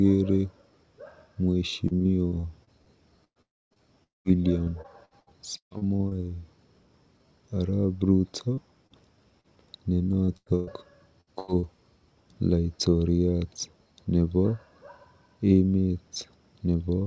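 From 1.88 to 3.79 s the sound turns choppy and metallic. This is repeated packet loss (robotic sound): the call keeps losing or receiving late audio, and each hole is patched by continuing the last sound before the next hole arrives. About 17 percent of that stretch is filled-in sound, and the longest hole is about 0.11 s. On a spectrogram the harmonics turn into flat, smeared blocks with abrupt edges between them. The waveform looks like a series of stitched, repeated cycles.

Inside that run, from 3.42 to 3.79 s, the audio falls away completely. This long network dropout was likely caused by a stretch of audio that never arrived. The last sound carries on as a fading buzz for a moment, then about 0.26 s of near-silence follows before the audio resumes without the missing part. A second dropout from 4.04 to 4.28 s behaves the same way, with about 0.16 s of silence. Both look like a tapering smear on the spectrogram followed by an empty gap, and the waveform collapses toward a flat line.

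Repeated packet loss returns from 4.64 to 6.14 s. It is denser here, with about 28 percent of the span concealed and holes up to about 0.14 s. It returns again from 10.25 to 11.66 s, where about 30 percent is concealed and the longest hole is about 0.12 s. Both stretches give the same robotic, stuttering texture and the same repeated-cycle pattern in the waveform.

Between these runs, short concealed packet loss appears at 8.54 to 8.60 s, 8.87 to 8.93 s and 9.41 to 9.47 s. In each one, about 30 ms of audio was missing and was filled by extending the preceding sound, then blended back into the real signal. Each is heard as a brief smear or wobble. On a spectrogram each shows up as a thin vertical band where the fine detail blurs, with a small discontinuity visible in the waveform.

Throughout the clip the spectrum stops at 8 kHz, which fits a wideband call codec such as G.722.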